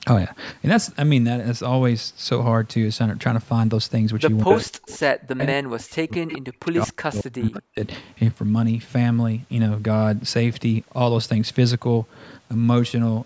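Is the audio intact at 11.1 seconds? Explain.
Yes, the speech at 11.1 seconds is intact, with only the ordinary call microphone processing audible in its missing lowest bass and nothing above 8 kHz.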